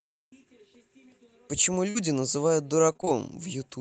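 A short speech recording over a call link, with two packet-loss faults. At 1.89 s the sound briefly freezes into a held, fading tail for about 50 ms, then jumps ahead, so a fragment is simply gone. This is a burst of packet loss: roughly 60 ms of audio never arrived in time, and the receiver stretched the last received sound to cover the hole before resuming at 1.97 s. From 2.93 to 3.09 s the speech turns choppy and robotic, stuttering in four quick dropouts. That is repeated packet loss: packets went missing again and again, each hole no longer than 25 ms, and about half of that stretch is patched-in continuation rather than real signal. Throughout, the audio carries the coding texture of a call codec, and its top end stops near 8 kHz, which fits Opus at around 32 kbps.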